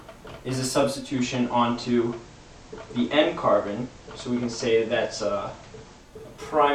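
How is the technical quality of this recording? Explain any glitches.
The recording has one clear technical fault. A digital radio blending to analogue problem runs from 0.92 s to 6.19 s. The receiver lost its digital stream and cross-faded over about 244 ms to the FM broadcast of the same station, then returned. A steady hiss rises to roughly 30 dB below the signal, and the level shifts by about 1 dB.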